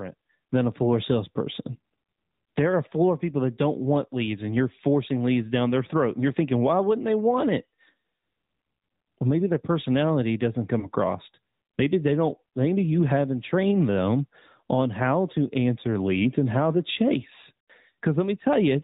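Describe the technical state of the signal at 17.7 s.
At 17.7 s the speech is briefly smeared and fading: from 17.62 to 17.71 s (80 ms) the sound is drawn out with falling level, then returns. These are lost AMR speech frames, which fits four 20 ms frames. The decoder kept reusing the last good pitch and vocal tract settings at decreasing gain.

Throughout this moment the speech also carries the plainly audible buzzy, synthetic colour of the AMR narrowband mobile codec at 10.2 kbps, with nothing above 4 kHz. Its vocal tract model, driven by a pitch predictor and a few pulses per 5 ms, rebuilds the voice coarsely at this rate.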